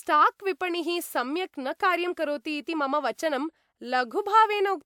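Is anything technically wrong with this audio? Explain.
No, nothing technically wrong can be heard in this speech recording; the signal stays stable and intact throughout.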